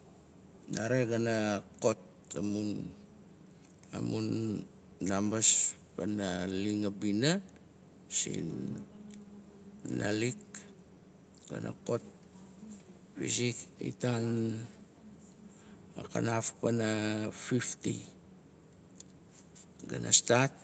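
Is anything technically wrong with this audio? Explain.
No, nothing is technically wrong with this speech; it is band-limited to about 8 kHz by the call path, which is expected for this kind of call audio and not a fault.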